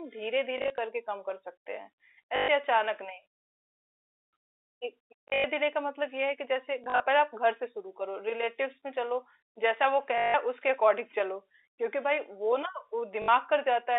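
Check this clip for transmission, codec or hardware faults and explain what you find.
One transmission fault recurs in the speech, which comes through a G.711 telephone channel limited to roughly 300 Hz to 3.7 kHz.

Packet loss with last packet repeated occurs at 0.58–0.78, 2.36–2.48, 5.28–5.44, 6.84–7.0, 10.18–10.34 and 13.22–13.28 s. Missing packets were filled by replaying the previous one, consistent with 20 ms packets. The longer runs, up to 160 ms, buzz at 50 Hz as a brief robotic stutter.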